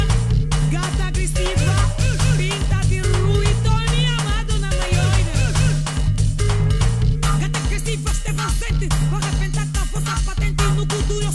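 Nothing stood out on listening to this audio.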